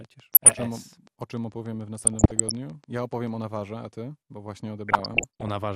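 Speech, about 6 s long, with three distinct problems. Throughout, the sound is dull and the top end is missing, with a gurgling, granular roughness. This is the signature of MP2 compression, and the likely cause is a low bitrate around 80 kbps. At that rate the Layer II encoder cannot fund all of its 32 sub-bands, so the upper bands drop out or flicker, and the bands that remain are coarsely quantised. A train of clicks runs from 0.05 s to 3.58 s, ending just before "a ty". It is a regular ticking of about 6.8 per second, roughly thirty pulses of similar shape in all, peaking at about the level of the speech itself. The clicks sit on top of the audio and continue through the gaps, and they are likely interference from nearby equipment or a faulty connection rather than anything in the source. DAB burbling appears three times: 0.33 to 0.62 s, 2.03 to 2.51 s, and 4.88 to 5.48 s. Each is a patch of burbling laid over the speech. 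This is what weak DAB reception sounds like, when bit errors at a rate well under one percent slip past error correction into the MP2 frames. Corrupted samples then put short blips of noise in single sub-bands, and corrupted scale factors make sub-bands jump in level for up to a frame.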